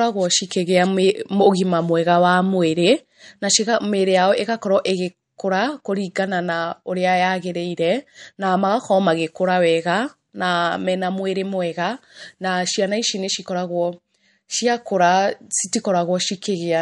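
Throughout, the speech sounds watery and swirly, with no treble above 11.2 kHz. This is likely MP3 compression at a low bitrate, around 48 kbps.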